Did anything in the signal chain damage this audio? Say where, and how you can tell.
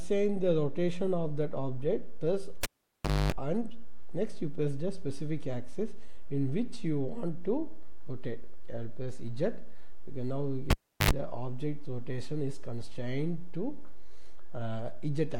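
Yes. The damage is in the analogue wiring: a cable pulled and plugged in, twice. At 2.63 s a pop cuts the sound to near silence for about 640 ms. Within that gap, a 50 Hz mains buzz lasts about 250 ms while only the tip touches, and a second pop brings the sound back at 3.32 s. The same pattern returns from 10.70 to 11.11 s, with about 350 ms unplugged and about 80 ms of buzz.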